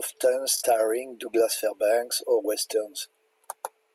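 Speech clip with a Bluetooth stutter from 0.58 to 0.63 s: about 43 ms of lost packets replaced by a repeated slice, showing as identical stripes on a spectrogram.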